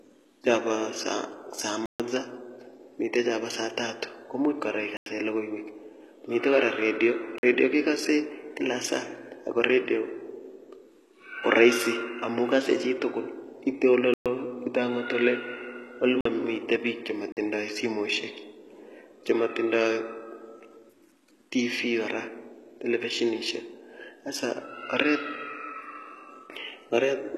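From the start, the speech carries the sound of HE-AAC compression, likely at about 16 kbps. Above the crossover the treble is present, but it is rebuilt from copied lower bands rather than coded, so s sounds come out gritty and lisped, and nothing at all lies above 12.3 kHz. Plain low-pass filtering would only dull the top; here the top is present but synthetic, with metallic harmonics that do not follow the voice below.

Six blocks of digital silence interrupt the audio. The first is at 1.86 s and lasts 139 ms. After "tatu komuch kora", a 93 ms hole opens at 4.97 s. Between "kora redio" and "redio kekose", a 46 ms hole falls at 7.38 s. Three more follow: 119 ms at 14.14 s, and 46 ms each at 16.21 s and 17.32 s. The 93 ms and 46 ms lengths fit buffers of 4096 and 2048 samples that were not filled in time. Each block cuts to silence and back with no fade. That hard-edged silence sets these apart from a dropout smoothed over by concealment or a quick fade.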